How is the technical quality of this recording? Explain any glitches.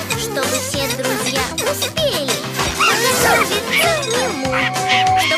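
The recording has one clear fault near the end. Loudspeaker feedback squeal appears from 4.25 to 5.25 s: a microphone re-amplifies its own loudspeaker until a 751 Hz tone swells over most of a second to sit a few dB above the sound.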